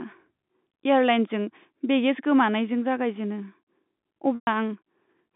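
From 4.35 to 4.47 s, packet loss with pitch repetition drops about 120 ms of speech, consistent with four lost packets. The receiver loops the last pitch period. A buzzy hold fades toward silence before speech resumes.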